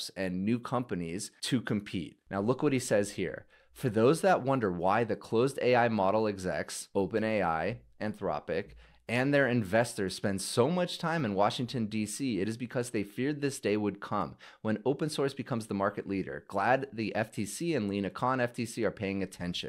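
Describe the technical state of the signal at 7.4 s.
Nothing at 7.4 s points to a fault; the signal there sounds intact.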